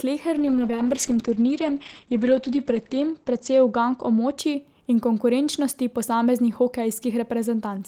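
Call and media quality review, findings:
Speech turns rough and muffled, 0.38–4.43 s, clearing before "in konkurenčnosti posameznih". Call bitrate drop: encoder forced from 32 to 9 kbps, about 2.7 s at lowest, bandwidth cut from 20 kHz to 8 kHz.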